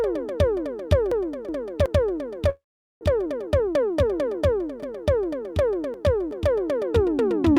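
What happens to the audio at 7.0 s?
At 7.0 s the music plays through intact, with no dropout, click, distortion or other fault at that point.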